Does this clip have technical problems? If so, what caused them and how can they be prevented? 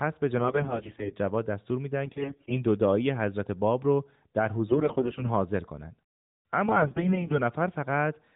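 Yes, there are four bursts of AMR bit errors, at 0.38 to 1.16 s, 2.06 to 2.63 s, 4.68 to 5.30 s (the mildest) and 6.66 to 7.40 s. Corrupted low-priority bits scramble pulse positions and fine gain and spectrum values, so the speech turns hoarse and gargly while keeping its pitch and level. It sits on a narrowband AMR link that sounds like the 12.2 kbps mode. Stronger radio coverage or extra channel protection would prevent it.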